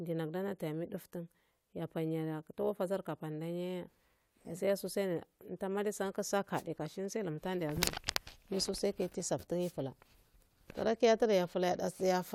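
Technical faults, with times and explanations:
6.54–6.63 s and 9.60–9.73 s, wireless microphone noise hit: two brief bursts of hiss, about 90 and 130 ms long, are heard as the FM radio link fades and receiver noise rises. Unlike a digital dropout, the sound is swept over by static rather than cut to silence.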